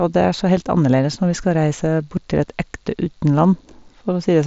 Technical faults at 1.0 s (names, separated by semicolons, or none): concealed Bluetooth headset packet loss